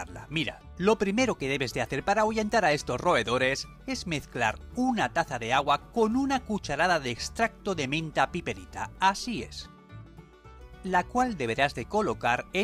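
No technical faults can be heard anywhere here.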